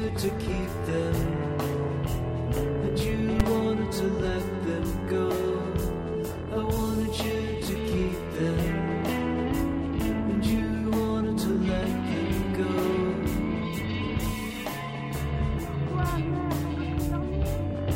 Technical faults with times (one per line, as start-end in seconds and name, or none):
3.40 invalid numbers at full scale